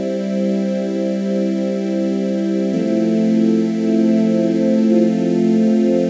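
Nothing here catches the ear as a fault; the sound simply runs its course without any glitch, dropout or distortion worth pointing to.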